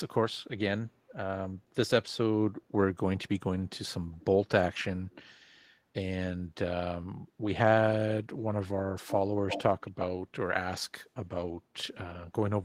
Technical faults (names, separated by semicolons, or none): echo leak